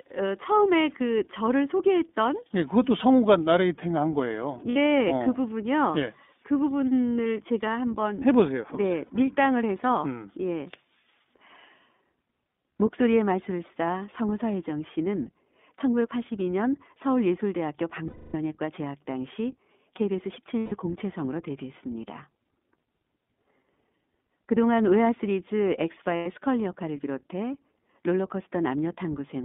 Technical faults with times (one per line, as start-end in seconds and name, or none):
0.00-29.45 iLBC codec
4.70-4.77 lost iLBC frames
9.06-9.10 lost iLBC frames
18.08-18.35 lost iLBC frames
20.58-20.73 lost iLBC frames
26.16-26.27 lost iLBC frames